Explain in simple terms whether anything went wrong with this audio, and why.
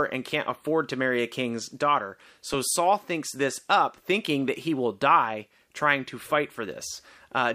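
Nothing went wrong with this audio, because no technical fault can be heard anywhere in the recording.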